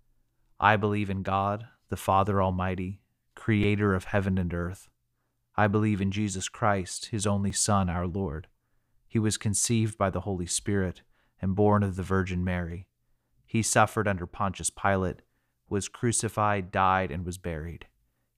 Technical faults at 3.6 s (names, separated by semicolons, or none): repeated buffer